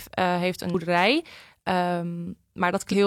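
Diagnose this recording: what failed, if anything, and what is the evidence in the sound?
The compressed stream carries damaged data in two places, a codec or storage fault. Where bytes in the file were corrupted, the decoder could not parse those frames, lost sync and had to hunt for the next valid frame header. The speech is interrupted by a brief glitch from 0.70 to 0.75 s and again from 2.88 to 2.94 s. Each lasts roughly 50 to 60 ms.

Hard clipping sits at the level stage. Between 0.96 and 1.05 s, the speech peaks exceeded the range that the converter or sample format could represent, overdriven by about 2 dB. The peaks were sliced flat rather than rounded. That squared-off waveform adds high-order harmonics, heard as a short crackle or edge on the loudest part of that syllable. The overload is modest, so the distortion stays confined to the peaks instead of becoming a continuous fuzz.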